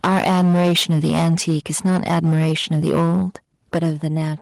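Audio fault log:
0.03–3.22 s and 3.73–4.07 s, microphone overload: the input was likely set too high for the converter, with peaks about 12 dB then about 8 dB over its limit. The flattened tops give a harsh, crackling edge, across about 15% of the first stretch and about 5% of the second.
0.06 s and 3.76 s, microphone volume stepped down: each time, just as the clipping starts, the level falls suddenly, by about 4 dB and then about 5 dB, likely because the call software detected the overload and cut the device's input gain in one step.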